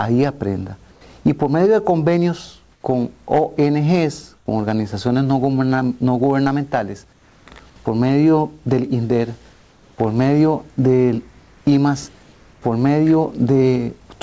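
Comfort noise in place of the background appears five times: at 0.92 to 1.01 s, 2.72 to 2.84 s, 4.37 to 4.46 s, 7.13 to 7.46 s and 9.53 to 9.98 s. In each pause the real background drops out. A smoother noise of a different tone takes its place, about 2 to 4 dB quieter. The likely cause is discontinuous transmission, with the receiver synthesising noise in the gaps. Nothing is heard above 8 kHz, which fits a G.722 call codec.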